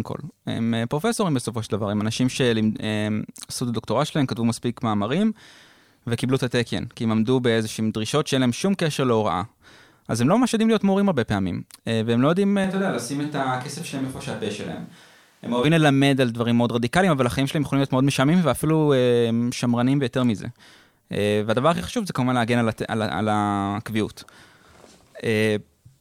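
At 12.64 s the speech abruptly turns roomy and hollow, losing its low end and dropping by about 5 dB, while background room noise becomes audible, though it stays far beneath the voice. At 15.64 s the close, full sound snaps back just as suddenly. The hard edges at both ends point to a likely switch to a distant microphone: the close mic's signal dropped out and a farther one, such as a camera's, briefly covered the gap.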